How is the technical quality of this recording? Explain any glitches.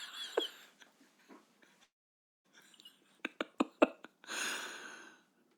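The recording has one clear glitch. From 1.83 to 2.46 s the sound trails off into a fading buzz or hiss, then near-silence, and resumes with a gap: likely a long network dropout, where the receiver stretched the last audio before going quiet.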